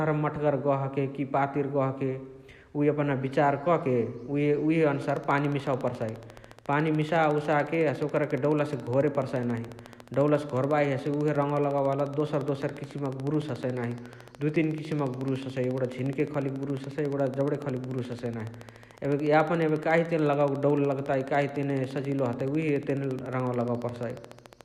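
From 5.02 s to 24.62 s, a regular train of clicks at 14 per second ticks over the speech and pauses, roughly 5 dB above it, likely interference rather than scattered dropouts.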